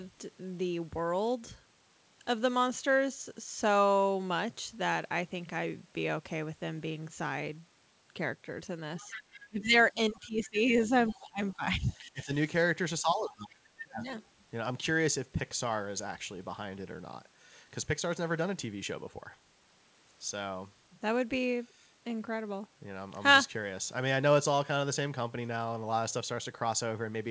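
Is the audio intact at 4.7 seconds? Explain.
Yes, the speech at 4.7 seconds is intact, with no dropout, glitch or distortion there, only the normal call-path band limit that leaves nothing above 8 kHz.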